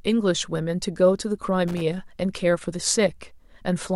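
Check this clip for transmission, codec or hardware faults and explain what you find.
There is one hardware fault. From 1.68 to 1.82 s, loose connector crackle: a worn contact chops the speech into irregular scratchy bursts, seen as jagged waveform dropouts and broadband vertical spectrogram streaks.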